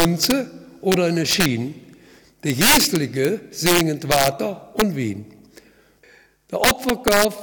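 Integer overflow hits at 0–0.32, 0.92–0.94, 1.31–1.46, 2.50–3.25, 3.66–4.28, 4.8 and 6.64–7.25 s. Peaks driven up to about 8 dB past full scale wrap to the opposite sign, producing violent cracks. The waveform shows full-range sign flips, and the spectrogram shows broadband vertical streaks.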